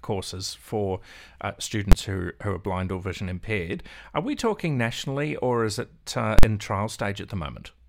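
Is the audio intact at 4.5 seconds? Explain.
Yes, the speech is intact at 4.5 seconds, with no audible fault at that point.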